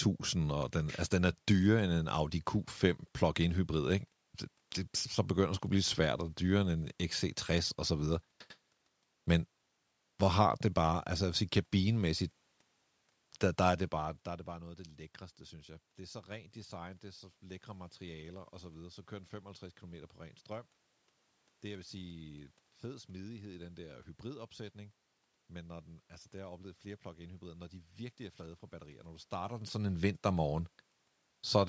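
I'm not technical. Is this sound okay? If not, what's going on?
Yes, this sound is okay.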